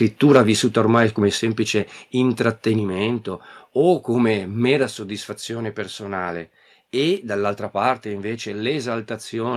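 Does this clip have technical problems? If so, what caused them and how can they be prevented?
Yes. Microphone overload runs from 0.24 to 0.38 s, just before "vissuta ormai come", with a harsh crackle on the loudest peaks. The input was likely set too high, pushing peaks about 4 dB past the converter's limit. The waveform shows flat-topped peaks on a few percent of samples, and the spectrogram shows broadband energy spreading upward. Lowering the input gain so peaks stay well below full scale prevents it.

The microphone volume stepped down four times. The first drop, about 2 dB at 0.37 s, comes right after the clipped peak. The second, about 4 dB, is at 1.38 s after "vissuta ormai come". The third, about 3 dB, is at 2.79 s. The fourth, about 3 dB, is at 4.83 s between "o come mera" and "soddisfazione personale e dall'altra". Each time, the voice and background drop together, likely because call software reduced the device's input level. 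On the waveform the envelope steps down abruptly, and on the spectrogram the whole band dims at once. Disabling automatic input adjustment and setting a safe fixed level beforehand prevents it.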